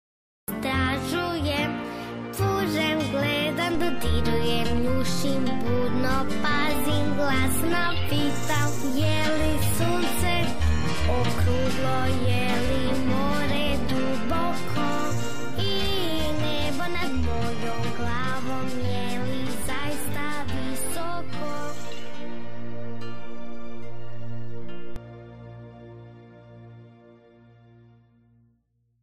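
The first 0.48 s is digital silence, then the sound enters abruptly mid-event. This cut-off start has no attack or fade-in, unlike a gated or faded opening.

At 3.75 s a DC step shifts the waveform's zero line, heard as a low thump. The offset lasts until 24.96 s. Unlike a dropout, the sound continues unchanged throughout.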